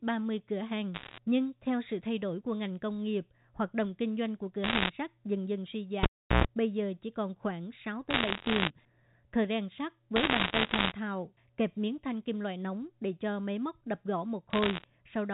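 A telephone-band speech recording, capped at 4 kHz by its G.711 mu-law coding, carries five short stretches of crackle, a dense spray of sharp ticks laid over intact speech. They fall at 0.94–1.18 s, just before "nhưng theo sự thay"; 4.64–4.90 s, between "kinh doanh của cửa" and "sắt dần dần suy"; 8.10–8.70 s; 10.16–10.92 s; and 14.50–14.84 s. These are bit errors on a digital phone line. Each flipped bit corrupts a single logarithmically coded sample, and when the sign or a high-order bit is hit, that sample jumps sharply and clicks. The error rate is roughly 1.5 percent in most bursts, about double that in the 10.16 s patch, and lower in the final one. At 6.03–6.45 s, right after "sắt dần dần suy" and before "bây giờ chỉ còn", a pop cuts the sound to near silence for about 0.36 s. A roughly 0.11 s burst of 60 Hz mains buzz follows, then a second pop as the audio returns. That sequence is a cable pulled and plugged in: the live lead was withdrawn, the plug's tip alone briefly touched and picked up hum, and full contact then restored the signal.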